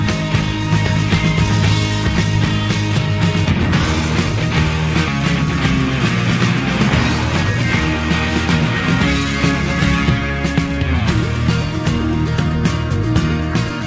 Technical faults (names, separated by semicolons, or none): skip ahead